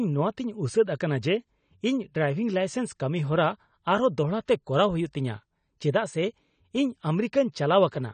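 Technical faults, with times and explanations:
Throughout, AAC compression: the speech is dull and smeared, and nothing survives above 9 kHz. Sibilants turn fizzy and sustained vowels warble. The likely cause is an AAC-LC encode at a low bitrate, which fits roughly 32 kbps. At that rate the encoder lowers its cut-off and quantises the remaining bands coarsely against its hearing model. That leaves gaps the ear hears as swirling texture. The damage is plainly audible.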